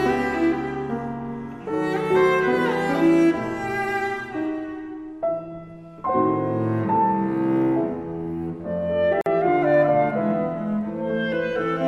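At 9.21 s the sound drops out for about 48 ms, ending at 9.26 s, then resumes exactly where it left off. This is a gap at a join of encoded pieces: the audio was encoded in separate segments and spliced without trimming, so the encoder's start-up delay and the padding of the previous segment's final frame both remain. Codec smearing softens the edges, leaving a shorter silent core inside the break.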